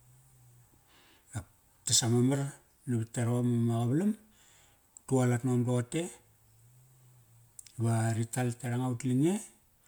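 Throughout the speech, generation loss sounds swirly, smeared and hollow, likely from about three MP3 passes at 128 kbit/s; the spectrogram shows scattered holes and nothing above 20.1 kHz.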